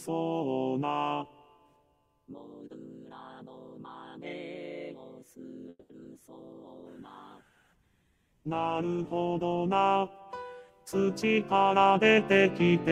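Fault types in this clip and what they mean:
Call audio freeze: around 5.7 s the sound stretches into a fading buzz for about 200 ms, brief silence included, likely packets stalling and starving the jitter buffer. Nothing's actually lost, just delayed.
Short concealed packet loss: at about 6.03 s a 30 ms hole appears; roughly 20 ms simply goes missing and a sliver gets patched, leaving a tiny smear.
Call bitrate drop: from 6.67 to 9.83 s the encoder falls from 128 to 17 kbps, top end narrowing from 20 kHz to 12 kHz, so it turns rough and dull.
Jitter buffer speed-up: from 11.08 to 12.71 s the receiver trims pitch-period slices to shed backlog, running about 9% fast at unchanged pitch and dropping roughly 150 ms.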